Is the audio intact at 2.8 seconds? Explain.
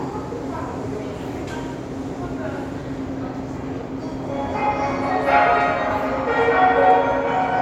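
Yes, the sound at 2.8 seconds is intact, with no dropout, click, distortion or other fault at that moment.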